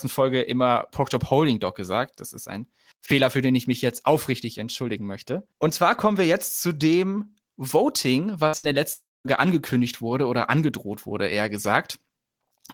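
At 8.47 to 8.55 s and again at 8.57 to 8.65 s the speech briefly smears into a short buzz or hiss that fades, then jumps ahead. These are two bursts of packet loss. Each time about 60 ms of audio never arrived, and the receiver stretched the last sound to cover the hole.

From 8.93 to 9.27 s a longer break follows. The sound trails off as a fading buzz or hiss, then goes silent for about 0.22 s before resuming on "angekündigt wurde oder angedroht", with roughly a third of a second of speech gone. This is likely a long network dropout, where nothing reached the receiver until the stream recovered.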